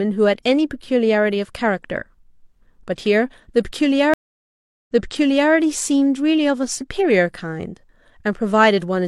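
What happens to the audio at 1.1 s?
Nothing goes wrong at 1.1 s; the speech carries on intact through that moment, with no break, dropout or added noise.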